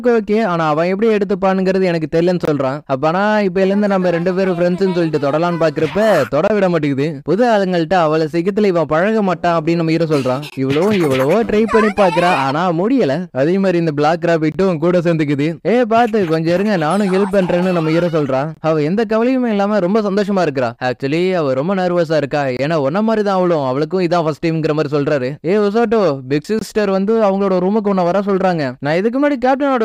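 A gap between chunks appears at 2.45–2.48, 6.48–6.50, 10.50–10.52, 14.52–14.55, 18.55–18.57, 22.57–22.59 and 26.59–26.61 s. The audio arrives in 4-second chunks. About 23 ms of silence sits at each join. Nothing is lost, but each join gives a brief, hard-edged dropout.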